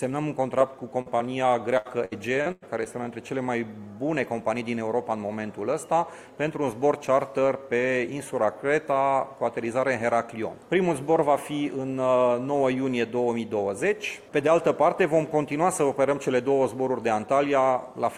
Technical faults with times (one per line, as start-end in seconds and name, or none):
1.01-1.21 short concealed packet loss
1.77-2.87 repeated packet loss (robotic sound)